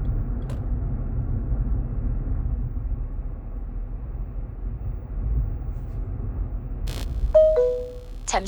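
A recording of everyday sounds, with computer activity noise from 6.87 s to the end at 8.47 s: a buzzing, chirping layer pulsing at around 70 times per second, sitting roughly 20 dB below the wanted sound. Changing load on the processor, graphics card or mouse shifts the ground the audio circuit shares, and that movement leaks in. Mains hum stays steady and locked to the supply frequency, but this noise starts and stops with the computer's workload and ignores the sound itself.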